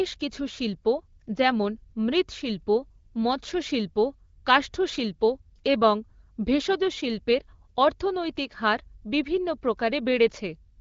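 No technical faults can be heard in the speech, which comes through the AMR wideband (HD Voice) codec at 12.65 kbit/s with only light coding traces and stays clear.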